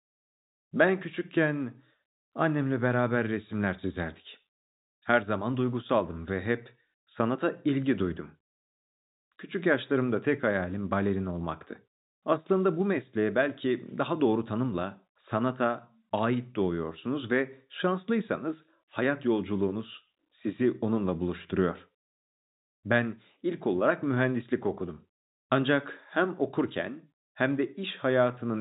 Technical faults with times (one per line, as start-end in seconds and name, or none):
none